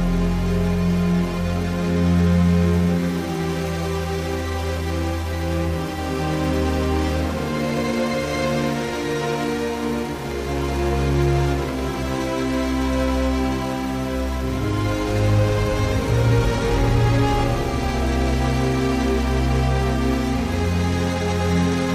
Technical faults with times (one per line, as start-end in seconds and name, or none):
0.00-21.95 periodic clock jitter